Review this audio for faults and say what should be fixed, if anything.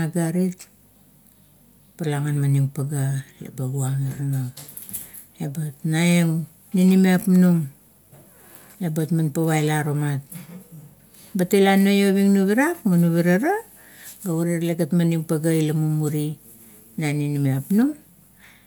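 Nothing needs fixing: the speech signal shows no technical faults anywhere in the recording.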